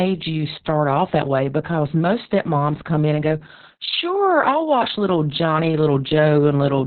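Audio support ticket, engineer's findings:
Opus voice compression throughout: speech muffled, hoarse, faintly robotic, nothing above 4.4 kHz. Narrowband SILK mode, coarse excitation coding, sounds like roughly 6 kbps.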